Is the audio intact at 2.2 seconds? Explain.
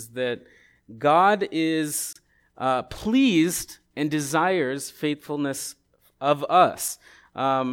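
No, the audio is not intact at 2.2 s. Just before it, from 2.13 to 2.16 s, there is a gap at a join of encoded pieces: a gap of about 28 ms, with smeared edges, left by untrimmed encoder start delay and last-frame padding. The speech resumes on "uh pleased and desires".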